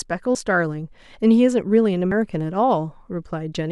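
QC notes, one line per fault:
0.35 s, compressed frames skipped. The speech jumps ahead by about two frames, roughly 200 ms of audio lost. Frames here last about 93 ms.
2.12 s, compressed frames skipped. About one frame, roughly 100 ms, is gone. The speech lurches forward.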